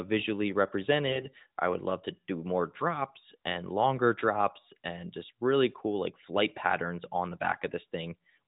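From 1.08 to 1.28 s, just before "I would love to", the speech breaks into AMR bit errors. The narrowband mobile codec cuts everything above 4 kHz, but in this stretch a fair share of the less protected bits, roughly one in twenty, arrived flipped while the checks on the critical bits still passed. The excitation pulses land in wrong positions and the fine pitch, gain and spectral values drift. Pitch and level roughly hold, but the sound turns hoarse, scratchy and gargly for about nine 20 ms frames.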